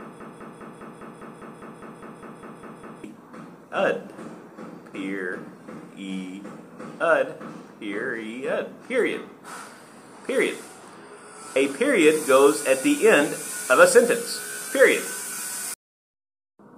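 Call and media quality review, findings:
Broken-record loop, 0 to 3.04 s, already running when the clip opens. A 202 ms fragment repeats exactly, back to back, about 14 times. Likely a stalled player, encoder or stream resending its last held buffer. Audio due in that span is lost.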